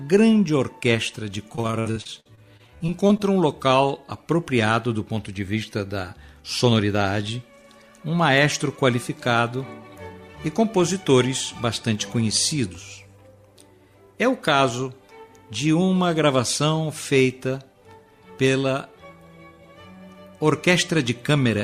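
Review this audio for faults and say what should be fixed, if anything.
Repeated packet loss (robotic sound), 1.55 to 3.21 s: sixteen gaps up to 56 ms are filled by extending the previous sound, which turns it choppy rather than briefly silent.

Jitter buffer speed-up, 6.65 to 6.95 s: about 40 ms of whole pitch periods are cut, so playback hurries to 109% speed with pitch unchanged, unlike resampling.

Fixing the network path's loss and delay bursts, and giving the jitter buffer enough steady headroom, would prevent both.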